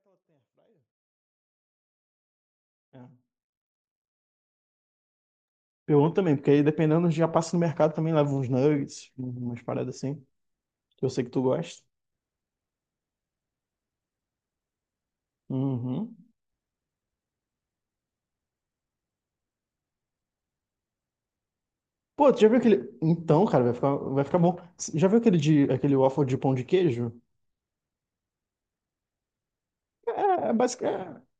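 There are no technical faults to describe in this speech recording; the level simply fades in smoothly from the very start to about 5.3 s.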